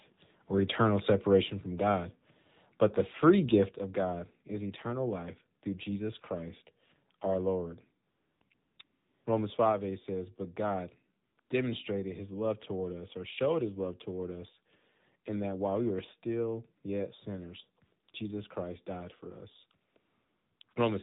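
Throughout, the speech is confined to a narrow telephone band, with nothing above 4 kHz, and has a buzzy, synthetic edge. This is the AMR narrowband mobile codec running at 7.4 kbps, a low rate for AMR-NB. It rebuilds the voice from a vocal-tract model excited by only a few pulses in each short subframe, so much of the natural texture is replaced by a coarse, artificial-sounding approximation.

At 1.41 s the whole signal, voice and background together, drops abruptly by about 3 dB, and at 3.69 s it falls again, by about 5 dB. These sudden level steps point to the microphone volume being stepped down, most likely by call software that judged the input too hot and cut the device's input gain in a single move each time.

From 8.1 s to 20.76 s the real background repeatedly gives way to a smooth, even hiss that cuts in and out. The gaps range from 20 ms to 620 ms and fall in clusters around 8.1 to 9.24 s, 11.24 to 11.5 s, 18.04 to 18.14 s and 19.9 to 20.76 s. 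This is AMR comfort noise: the sender treated those moments as silence and stopped sending speech frames, and the receiver filled them with generated noise shaped only roughly to the background's level and spectrum.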